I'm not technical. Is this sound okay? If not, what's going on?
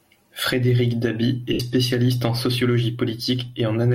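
No. From 1.53 to 1.60 seconds there are lost LE Audio frames: a brief wireless dropout the decoder covered with a smeared, fading, noisy patch.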